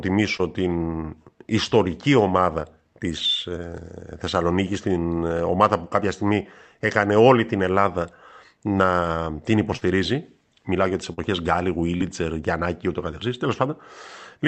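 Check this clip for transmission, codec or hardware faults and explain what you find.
The speech shows four brief episodes of short concealed packet loss, at 0.37 to 0.41 s, 9.77 to 9.83 s, 11.13 to 11.19 s (just after "για τις") and 11.97 to 12.02 s. In each, about 20 to 40 ms of audio arrived too late. The receiver bridged the gap by extending the preceding sound and then crossfading back, which leaves a short smear or wobble. Unlike a plain dropout, there is no silent hole or hard click.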